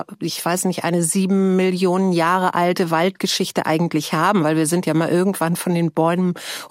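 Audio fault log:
No faults can be heard anywhere in the clip. There is nothing in the audio to log.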